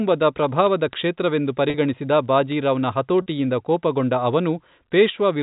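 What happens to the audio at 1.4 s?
At 1.4 s the receiving device is running on its own clock, not locked to the digital link feeding it, and the two clocks drift apart by something on the order of 500 parts per million. That produces word clock ticks: each time the clocks slip, one sample is dropped or repeated, leaving a sharp click roughly every 40 ms. The ticks run from 0.14 s to 5.39 s, about a hundred of them, over the telephone-band speech.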